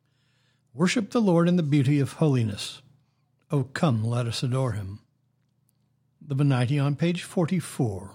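No technical faults are audible anywhere in the speech.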